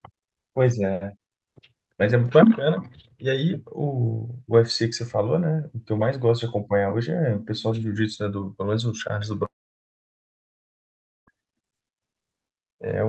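Speech, carried through a call codec whose high frequencies stop near 8 kHz. From 9.45 s to 11.29 s the audio breaks off. A brief fading tail gives way to near silence for almost 1.8 s. Speech then resumes, with that stretch simply gone. This is likely a long network dropout.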